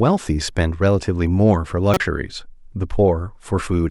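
A corrupt frame decoded at 1.94 to 2.00 s breaks into the speech as a short, loud chirp, squeak, blip or burst of noise. Damaged bits in a couple of compressed frames were decoded anyway, so misread gains and codes put energy at the wrong frequencies, peaking around -5 dBFS.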